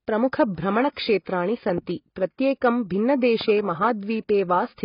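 Throughout the speech there is heavy codec damage, likely from AAC compression. Nothing remains above 5.2 kHz, which fits AAC-LC at around 16 kbps. Unlike a plain low-pass filter, the damage goes beyond a dull top end: the remaining band is smeared and warbly, with fizzy sibilants.

From 1.69 to 1.80 s, two loud pops sound about 10 dB above the speech, and a single one follows at 3.41 to 3.43 s. Each is likely a voltage spike added to the signal. Unlike a dropout, the speech carries on beneath each pop.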